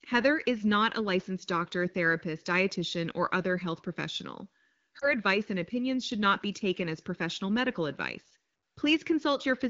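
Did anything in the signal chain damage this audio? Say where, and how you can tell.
Yes. Lost AMR speech frames in the network stage, between about 4.99 and 5.14 s, right after "or other health professional" and before "and opinions should not". Radio errors corrupted the coded frame so it failed its checksum, and the AMR-WB decoder, running at 15.85 kbit/s, filled the gap by reusing the last good pitch and vocal tract settings at reduced gain. The brief dip or warble points to a single lost 20 ms frame, not a longer run.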